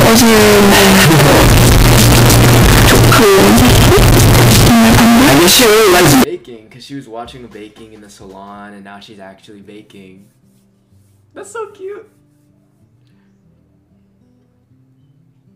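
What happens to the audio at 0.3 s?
At 0.3 s the audio is buried in very loud, harsh distortion that runs from 0.0 to 6.24 s, likely from signed and unsigned mixed up on 16-bit samples. The flipped top bit turns every zero crossing into a full-range jump. Unlike clipping, quiet passages become as loud as everything else.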